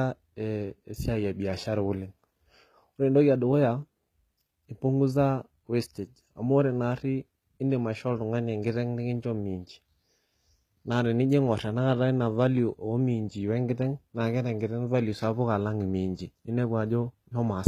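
From start to finish, the speech has that gritty, metallic sheen in the s sounds, and nothing reaches past 14.9 kHz. That's likely HE-AAC compression at a very low rate, around 20 kbps, with the treble rebuilt from copied lower bands that don't quite line up.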